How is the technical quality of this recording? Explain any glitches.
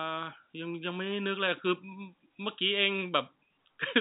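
Nothing stood out on listening to this speech recording, which carries the narrow band of a telephone line with no sound above about 3.8 kHz.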